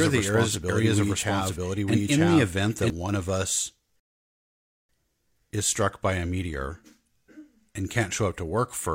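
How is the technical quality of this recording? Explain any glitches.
The recording has two glitches, a doubled track at the start and a playback stall at about the four-second mark.

Doubled audio track, from the very start to 2.9 s: a second, full-band copy of the speech runs about a second behind the original at roughly the same level. It likely comes from the audio being captured twice through a slower path, or from an edit that left two copies out of step. You hear the speech overlapping itself with no room colour on the copy, and the echo cuts off abruptly at 2.9 s.

Rebuffering stall, 4.00 s to 4.89 s: the player ran out of downloaded audio and stopped until more data arrived. The speech drops to silence for 0.89 s, then resumes exactly where it left off. Nothing is skipped or lost, but that gap is added to the timeline, so the pause is just dead air.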